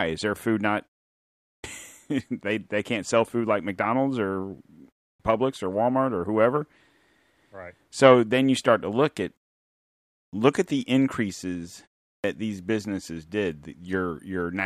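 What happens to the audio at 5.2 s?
At 5.15 to 5.20 s there is a clipped start after a pause. Following a silence of about 0.31 s, the output path has dropped into an idle state and needs time to wake and lock again, so roughly 46 ms at the onset of the returning speech is swallowed. The speech jumps in abruptly, missing its opening sound. A muted pause would only quiet the background during the gap and leave the next sound whole; here the sound itself loses its beginning.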